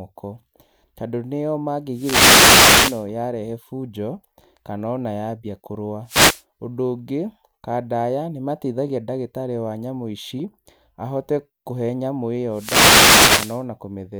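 Wireless microphone noise hits occur from 1.92 to 3.07 s after "tondũ nĩo", 6.05 to 6.43 s after "kana ona yambia kũrũa", and 12.50 to 13.64 s after "ahote kũhe nyamũ". Each time the FM radio link fades, receiver noise rises, and a swish of static is heard.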